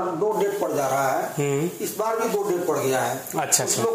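From 0.32 s to the end, pre-emphasis is left on: a 75 µs FM-style treble boost was applied and the matching de-emphasis never undid it. Highs sit about 13 dB above 1 kHz at 10 kHz, so the sound turns thin, bright and hissy, with exaggerated sibilance.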